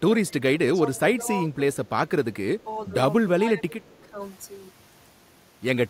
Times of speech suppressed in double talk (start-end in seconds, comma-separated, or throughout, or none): 0.25-1.28, 2.63-2.94, 3.36-4.18